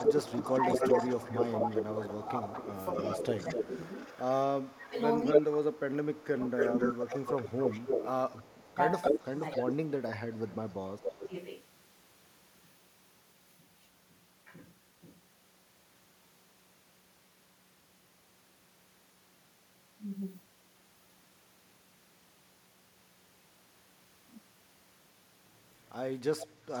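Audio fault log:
0.0–5.46, 6.57–9.77, 10.32–11.13 and 26.15–26.8 s: echo leak. A delayed copy of the speech returns about 245, 267, 277 and 341 ms late. It is as loud as the talker at first, then about 5 and 10 dB lower. The likely cause is a loudspeaker echo the canceller failed to remove.
0.38–3.59, 4.73–7.9, 8.71–10.21 and 11.11–11.35 s: speech suppressed in double talk. The talker dips in pieces while the echo overlaps. The drops reach roughly 10, 25, 15 and 20 dB, over about one second, two seconds, under one second and a brief moment. The likely cause is the canceller turning down its own talker along with the loudspeaker echo.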